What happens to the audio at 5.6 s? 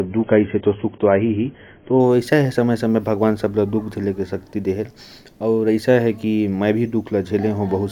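Nothing goes wrong at 5.6 s; the speech continues intact through that moment with no dropout, click or distortion.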